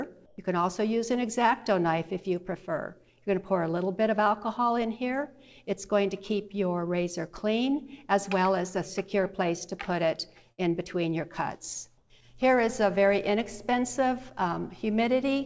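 From 0.26 to 0.38 s the background changes character for about 120 ms. Its texture goes flat and featureless and drops by about 5 dB, then the real background returns. The likely cause is comfort noise in place of the background: the sender paused transmission during a quiet stretch, and the receiver filled the gap with synthetic noise roughly matched to the background's spectrum. The same swap happens from 11.98 to 12.10 s, again for about 120 ms, with a smaller drop of about 2 dB.

At 10.52 to 10.60 s there is a burst of packet loss. The receiver extends the last received sound for about 60 ms and lets it fade. About 60 ms of the original audio never arrives, so the sound picks up slightly further along. The missing slice is heard as a brief smeared hold followed by a small forward jump. Throughout the clip nothing is present above 8 kHz, which fits a wideband call codec.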